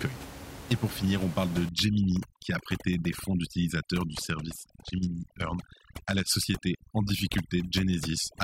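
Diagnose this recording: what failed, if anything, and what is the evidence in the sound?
Call processing applied overdone noise removal from 1.69 s, right after "finir on parle de", to the end. The room noise, about 12 dB below the speech, is gated toward silence with twinkling specks, while quiet parts of the voice go with the suppressed weak bands.

At the codec stage, a Bluetooth SBC bit pool drop from 4.05 to 6.30 s starves the upper sub-bands and coarsens the rest. The treble dulls and a gritty noise rises, consistent with the bit pool falling from 28 to 11, around 90 kbps, before recovering.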